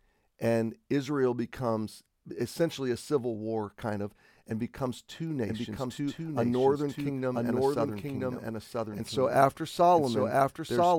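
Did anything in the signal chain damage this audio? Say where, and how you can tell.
Yes. At 5.48 s, after "of and becomes two", a doubled audio track starts abruptly. An equally loud copy trails about a second behind to the end. Likely a slower second capture path.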